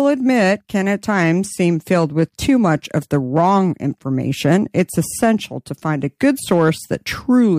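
Hard clipping hits at 1.91 to 3.58 s, 4.45 to 5.31 s just before "to find a", and 6.23 to 6.69 s right after it. Peaks overshoot by about 2 to 3 dB and are sliced flat, giving brittle crackle on louder syllables, sharper and brighter than the rounded thickening of soft saturation.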